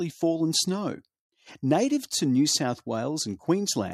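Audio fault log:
No fault to log.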